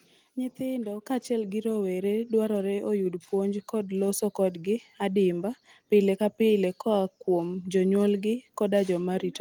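Speech with three microphone volume stepped up events, at 1.02 s (about 5 dB, before "kaachiel gi"), 2.04 s (about 3 dB) and 4.08 s (about 2 dB, between "puonj kod" and "kodgi admiba pile ka"). Software raised input gain abruptly, lifting voice and background together, seen as sudden waveform-envelope steps and brighter spectrogram bands.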